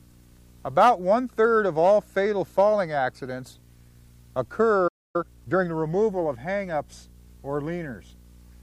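A playback stall begins at 4.87 s: the sound cuts off mid-flow and stays silent for about 0.27 s, until 5.16 s. The likely cause is the player running out of buffered data, or its output thread being blocked, so nothing reached the output until it recovered.

Time-compressed catch-up follows from 5.16 to 5.68 s. The player works off its backlog by cutting out small fragments and cross-fading the remainder, so the audio runs at 1.5 times normal speed. It sounds hurried and keeps its original pitch.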